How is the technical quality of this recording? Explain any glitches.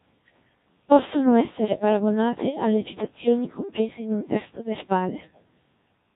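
Poor: robotic, buzzy speech throughout, the sound of the Codec 2 vocoder. Only pitch, voicing, energy and spectral envelope survive, resynthesised from sine waves; the heavy damage fits about 1.3 kbit/s.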